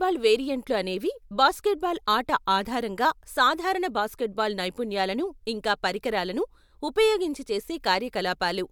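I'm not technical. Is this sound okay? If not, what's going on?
Yes, nothing wrong here.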